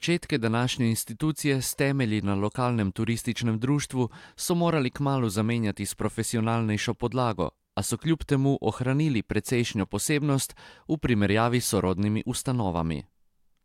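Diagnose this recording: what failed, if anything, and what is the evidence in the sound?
Nothing in this speech recording points to a failure anywhere along the chain, and there's no sign of trouble worth flagging.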